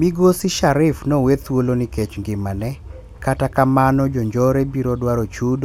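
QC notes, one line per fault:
QC finds no fault to note in this speech clip.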